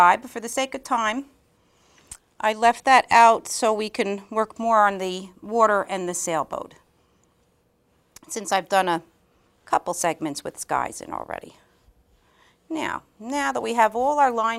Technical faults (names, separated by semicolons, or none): overlap between stream segments